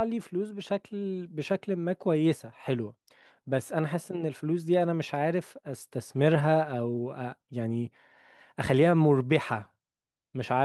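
No technical faults can be heard anywhere in the recording, from its opening moment to its close.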